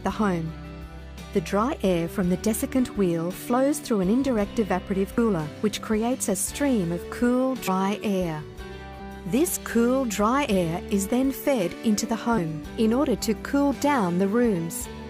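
Sudden forward jumps in the sound occur at 1.70 s, 5.18 s, 7.67 s, from 8.99 to 9.01 s, at 10.47 s and from 12.37 to 12.39 s. These are compressed frames skipped: whole blocks of encoded audio never reached playback. The missing stretches run from a few tens of milliseconds to about a fifth of a second, the largest at 9.0 s, which points to several frames lost at once.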